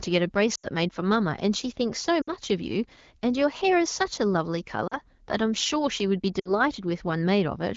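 At 0.55, 2.22, 4.87 and 6.39 s, lost AMR speech frames make the decoder stretch the last good speech with falling gain, so the sound briefly fades to near silence. On a spectrogram each gap shows as smeared, decaying bands, and on the waveform the envelope tapers.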